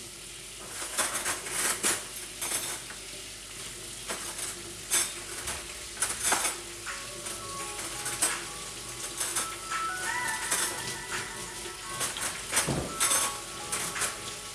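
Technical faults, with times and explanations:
Throughout, resampler restarted on every block: converting 48 kHz to 24 kHz in isolated 10 ms chunks leaves edge errors, heard as a 100 Hz buzz riding on the sound.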